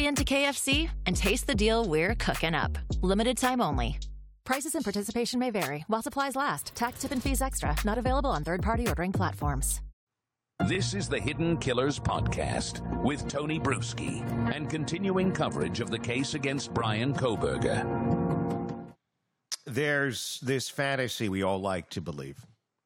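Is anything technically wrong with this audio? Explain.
No, nothing is technically wrong with this audio.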